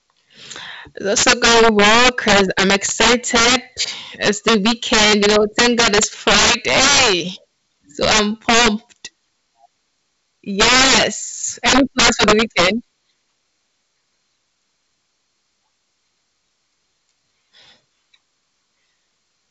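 Integer overflow hits at 1.17–3.56 s, 4.23–7.13 s, 8.03–8.68 s, 10.60–11.03 s and 11.66–12.68 s, driven about 10–15 dB over range. Peaks wrap to the opposite sign instead of limiting, producing violent cracks harsher than clipping. Throughout, the G.722 wideband telephone coding stops near 7.7 kHz with faint upper-band hiss, running at 56 kbit/s, where the lower band loses bits and gets slightly noisier.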